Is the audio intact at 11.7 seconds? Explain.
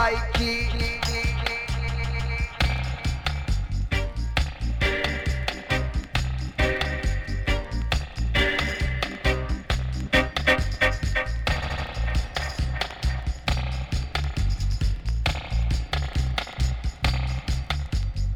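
No. From 11.61 to 11.85 s the sound stutters, with a short chunk of about 78 ms played again three times. This is repeated frames: a run of compressed frames, likely three, was written more than once, adding about 235 ms.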